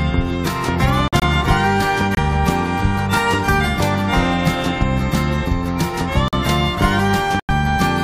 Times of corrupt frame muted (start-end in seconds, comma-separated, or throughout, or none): 1.08-1.23, 2.13-2.19, 6.28-6.35, 7.40-7.51